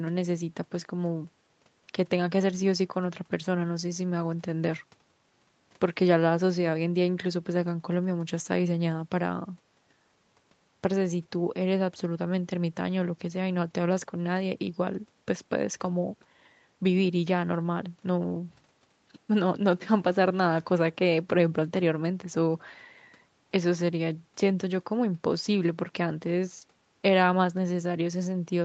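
Nothing in this speech recording stood out as a technical problem on listening.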